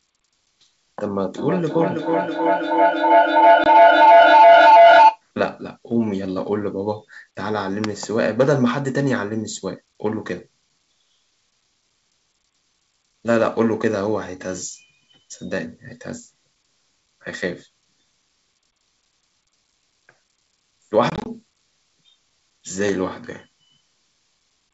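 It's a speech clip on a G.722 wideband call, coming through clear up to around 7 kHz with that light upper-band hiss. From 1.38 to 5.23 s there's a feedback howl: two devices in the same room are on the call, so the mic-to-speaker loop keeps adding gain each pass. It narrows to a tone around 700 Hz with repeats roughly every 300 ms and peaks about 11 dB above the speech. Then there's packet loss on an ADPCM call. At 3.64 to 3.67 s a 20 ms hole cuts out hard, which sounds like a single dropped packet. From 21.10 to 21.29 s, 80 ms goes missing in short gaps of no more than 20 ms each, spread over 160 ms, which fits about four packets. After each gap the decoder's predictor and step size are out of sync with the sender's, so the audio comes back with a little distortion before settling.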